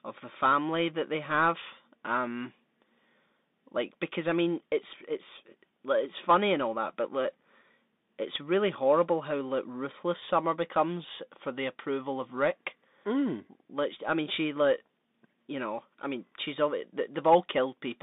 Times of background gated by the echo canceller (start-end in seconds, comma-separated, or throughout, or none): none